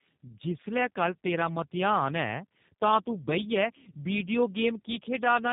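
Across the whole speech clip the signal shows tandem speech coding: it has passed through G.729A at 8 kbit/s, been decoded to G.711 mu-law at 64 kbit/s, then coded again with G.729A. The second low-rate coder works on the first one's already degraded output, so its errors stack. The result sounds rough, muffled and warbly, with nothing above about 3.8 kHz.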